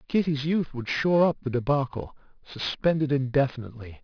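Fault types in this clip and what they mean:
Aliasing: the whole clip sounds like it was resampled down, fitting a drop from 24 kHz to 11 kHz, with no filter first, so anything above 5.5 kHz folds back into the band as odd, unrelated tones, leaving the sibilants gritty and metallic, roughly 20 dB under the speech.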